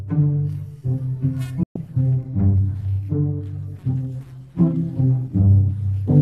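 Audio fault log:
1.63–1.76 s, digital broadcast dropout: the sound fades out in about 3 ms and stays silent for roughly 120 ms before resuming mid-programme. The receiver has muted its output because incoming frames were either missing or failed their error check, and it holds silence until valid frames arrive again. The gap's length points to a run of about five consecutive bad frames, and whatever was transmitted during that window is simply absent rather than distorted.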